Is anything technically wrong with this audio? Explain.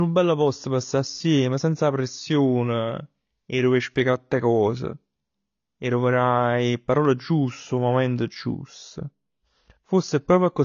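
Yes. Throughout the speech, the sound is dull and smeared, with a warbling, fizzy texture on sustained sounds and sibilants and nothing above 6.9 kHz. This is likely AAC compression at a low bitrate, around 24 kbps, which forces a lowered cut-off and coarse quantisation.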